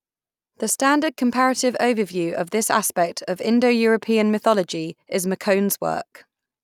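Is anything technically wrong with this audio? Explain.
No, no technical faults here.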